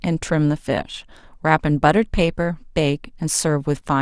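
No technical faults can be heard in this recording.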